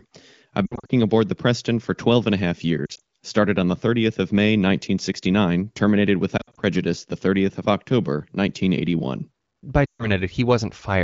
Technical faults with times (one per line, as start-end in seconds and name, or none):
0.66-0.91 lost AMR speech frames
2.86-3.00 lost AMR speech frames
6.38-6.61 lost AMR speech frames
9.86-10.10 lost AMR speech frames